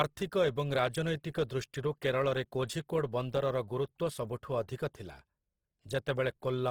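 Throughout the speech, tones sound rough, grainy and noisy, with content reaching 20.2 kHz. This is likely Opus compression in music mode, filling starved bands at a low bitrate.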